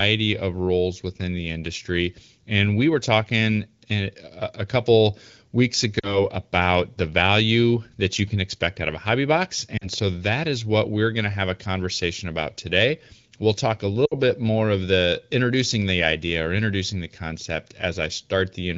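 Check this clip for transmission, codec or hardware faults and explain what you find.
One transmission fault recurs: lost AMR speech frames. It shows up three times. The AMR wideband coding sounds clear, which fits a rate near 15.85 kbit/s.

Lost AMR speech frames occur at 5.99 to 6.19 s, 9.78 to 9.88 s and 14.05 to 14.14 s. They cover about 40, 40 and 60 ms of audio. Damaged frames were discarded. The decoder repeated its last good settings with falling gain, so the sound briefly smears and dips, then returns weak or rough for a moment.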